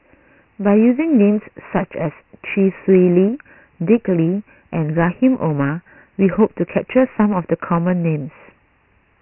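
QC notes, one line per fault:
Throughout: Dialogic VOX ADPCM. Nothing in the speech reaches above about 2.9 kHz, which points to the 6,000-samples-a-second form of this 4-bit telephony codec, around 24 kbps. Each sample is stored only as a small step from a running prediction, so the coarse steps leave heavy quantisation damage. It is heard as a gritty hiss that rides along with the speech and rises and falls with it, over a dull, narrow band.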